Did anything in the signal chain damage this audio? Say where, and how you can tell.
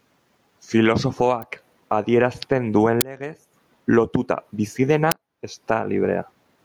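Yes, three things. First, gain pumping at the input stage: loud and soft parts are squashed closer in level throughout the speech, swinging by around 20 dB. That's likely mic gain set far too hot, with a fast limiter clamping down on every peak.

Second, an electrical switching spike on the analogue wiring: a sharp snap at 1.42 s, right before "adierazten duen legez". It sits on top of the speech, likely a nearby switch or static discharge arcing and getting picked up by the line.

Third, an uninitialised buffer at the driver or buffer stage: short, loud cracks at 3.01 s, just after "adierazten duen", and at 5.12 s, just after "lotuta bizi". Their lengths fit blocks of 512 and 256 samples played out before any audio was written into them.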